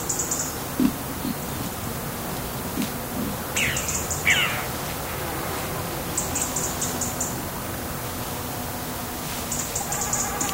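No faults detected in this recording of sounds; nothing in the signal chain calls for attention.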